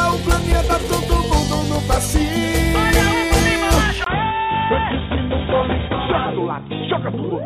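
At 4.04 s the audio likely switches to a poorer input device: a 20 ms gap, then nothing above 3.8 kHz, somewhat lower level, and a faint new noise floor, unlike a plain filter change.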